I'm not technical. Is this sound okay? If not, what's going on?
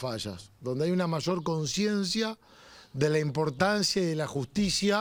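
No. From about 0.64 s to the end, the sound carries a faint hiss and roughness. This is sample clock jitter. The device recording or playing the sound keeps time with a clock, and that clock is wobbling slightly. Each moment of sound is captured a tiny bit early or late, off by around two millionths of a second. The roughness grows on louder and brighter passages and fades away in quiet moments.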